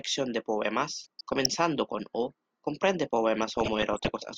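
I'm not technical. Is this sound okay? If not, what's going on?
No. From 0.99 to 1.50 s and again from 3.37 to 4.18 s the speech breaks into DAB burbling. A weak digital radio signal let corrupted data slip through, so narrow slices of the sound jump in level, with short blips of noise.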